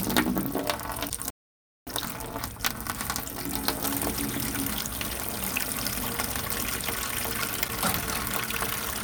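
A likely broken MP3 bit reservoir comes first, at 1.09 to 1.11 s. After frames were lost, the next frame reached back for borrowed data and decoded bytes belonging to a different frame. The sound skips ahead, and about one 26 ms frame's worth comes out as a brief chirp, burst of noise or short hole.

At 1.30 s a playback stall follows: the player was likely starved of data or blocked, and the output falls silent for about 0.57 s, until 1.87 s, cutting the sound off mid-flow.

From 1.87 to 2.99 s comes time-compressed catch-up. To clear the backlog built up during the silence, the player trims and cross-fades small slices, so the sounds run at 1.5 times normal speed while keeping their pitch.

The broken bit reservoir returns at 6.02 to 6.05 s and 7.67 to 7.70 s, each time a short jump with a chirp, burst of noise or short hole of about one frame.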